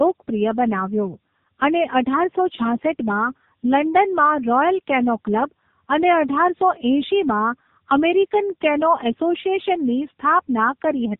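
Throughout, tandem speech coding: the speech went through a low-rate mobile codec twice, so it sounds rougher and more warbly than a single pass would. Nothing is heard above 3.7 kHz.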